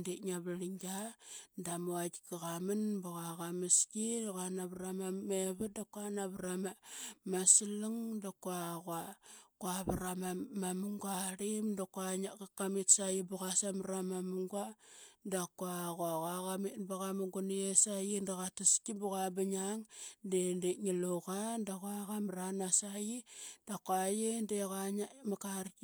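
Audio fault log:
The speech signal shows no technical faults at any point.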